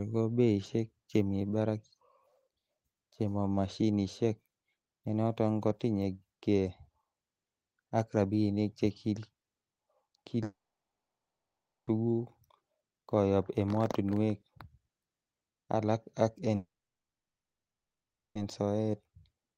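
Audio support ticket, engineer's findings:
Long network dropout, 10.43–11.90 s: speech cut, brief decaying buzz from concealment stretching the last sound, then about 1.3 s of near-silence; resumes with the span missing. Long network dropout, 16.55–18.38 s: same signature, roughly 1.7 s silent after the fade, lost audio not recovered. Likely cause: stream stalled in transit, receiver extrapolated briefly, then muted.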